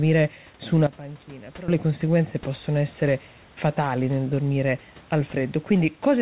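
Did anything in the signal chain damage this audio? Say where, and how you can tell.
Yes. Just after "su una", at 0.87 s, the speech and room noise drop together by about 16 dB, then snap back at 1.68 s before "le conseguenze possono essere." This is a sudden gain jump, likely an unramped digital gain step.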